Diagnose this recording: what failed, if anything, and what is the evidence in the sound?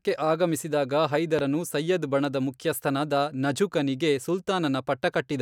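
A single loud pop sits on the speech from 1.39 to 1.41 s, just before "ಸಯ್ಯದ್ ಬಣದ", peaking roughly ten decibels above the speech. The speech carries on unbroken underneath, which separates it from a dropout or buffer glitch, where the sound itself would be cut or repeated. A lone voltage pulse entering the signal chain, likely at the analogue wiring stage from a plug, switch or static discharge, was shaped by the following circuitry into a short thump.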